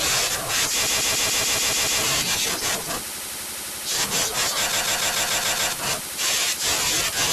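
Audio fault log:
0.85–2.01 s, repeated frames: the same 144 ms chunk of speech plays over and over, eight extra times, so you get a stutter. A run of compressed frames got written or sent again, which adds about 1.15 s.
4.72–5.73 s, repeated frames: the same thing again. A 144 ms block repeats seven extra times, with the same stutter, and adds about 1.01 s.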